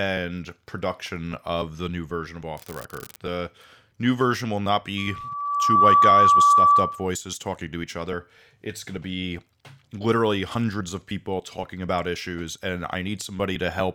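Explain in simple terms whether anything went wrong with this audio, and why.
An unreliable data bit causes a fizzy crackle from 2.58 to 3.16 s, just after "the new version of". One line carrying the digital audio is failing, so random samples get the same fixed jolt. Together those jolts make a steady crackle that continues even between sounds.

A loudspeaker feedback squeal runs from 4.97 to 7.09 s, between "new version will not" and "talking to each other". The microphone picked up its own loudspeaker and kept re-amplifying one pitch, 1.2 kHz. Over about a second that tone swells into a howl well above the speech.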